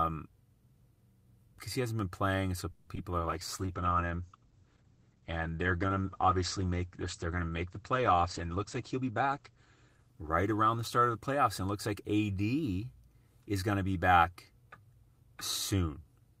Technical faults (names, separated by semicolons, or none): call audio freeze; short concealed packet loss; call bitrate drop; jitter buffer speed-up